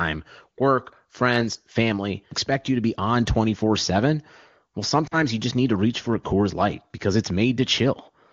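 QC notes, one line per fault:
5.07–5.15 s, lost AMR speech frames: a 40 ms stretch where the decoder repeated the last good pitch and vocal tract shape at falling gain, consistent with two dropped 20 ms frames. It is heard as a brief dip toward near silence. On a spectrogram the harmonics flatten and smear, and the waveform envelope sags before the wideband speech resumes.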